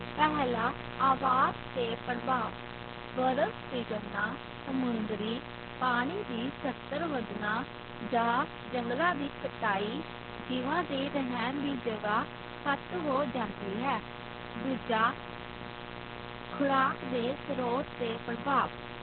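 From start to finish a steady mains buzz sits under the speech, only around 10 dB below it. Sharp switching spikes at twice the 60 Hz cycle rate give a raspy edge. A spectrogram shows evenly spaced horizontal lines at multiples of 60 Hz, and the waveform carries a fine repeating ripple.

Throughout, the speech also carries heavy Opus voice compression damage. The linear-prediction voice coder is working narrowband, at a rate that sounds like about 8 kbps, so nothing survives above 4.3 kHz. It sounds muffled, hoarse and slightly robotic. A spectrogram shows a hard ceiling at that frequency and smeared texture beneath, consistent with 20 ms frames.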